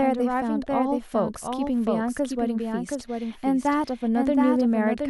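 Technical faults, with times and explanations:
Throughout, doubled audio track: the speech is likely being picked up a second time through a slower path, so a second full-band copy is mixed in about 0.7 s behind the original and roughly 5 dB quieter. Because the late copy carries no decay or room colour, it is heard as a distinct, clean repeat of each phrase rather than as reverberation, and it overlaps the following syllables, smearing the speech into two out-of-step layers.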